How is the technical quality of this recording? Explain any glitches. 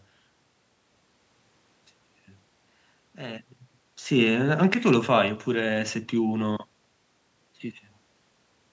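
The recording has no glitches to explain: its technical quality holds up, with only ordinary call processing, some room noise and the talker shifting position around 3.5 and 7 seconds.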